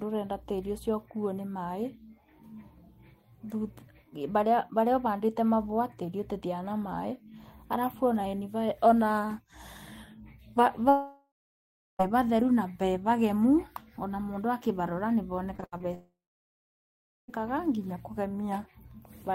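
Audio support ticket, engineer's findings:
Long network dropout, 10.89–12.01 s and 15.94–17.30 s. Speech cuts to a fading buzz, then silence for about 0.68 s and 1.13 s respectively, resuming with content lost. Likely cause: network path stalled, with the jitter buffer's concealment extrapolating the last frame until it decayed. Spectrogram: smeared harmonic band fading to an empty block. Waveform: tapering envelope into a flat line.

Repeated packet loss (robotic sound), 15.57–15.83 s. Choppy speech from four short holes, the longest 75 ms, with roughly half the span patched by repeated-frame concealment. Lossy link dropping packets in bursts, just before the second dropout. Spectrogram: striped, repetitive texture with sharp vertical edges. Waveform: short looped segments with abrupt joins.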